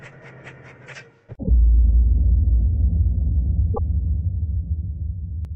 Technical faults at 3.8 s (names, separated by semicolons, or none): damaged data in a compressed stream